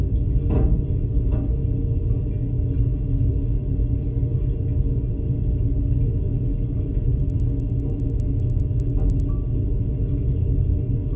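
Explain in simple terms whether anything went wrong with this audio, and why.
From 7.2 to 9.3 s, steady ticks sound ten times a second. That's a resampler restarted on every block: each 100 ms chunk was converted alone, leaving small glitches at its edges.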